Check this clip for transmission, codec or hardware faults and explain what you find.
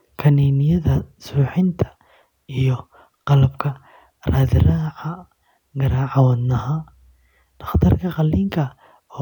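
No faults detected.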